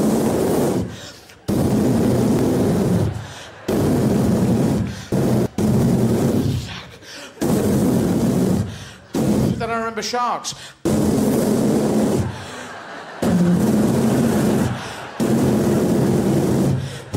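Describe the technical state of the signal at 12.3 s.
At 12.3 s the signal is intact, with no audible technical fault at that point.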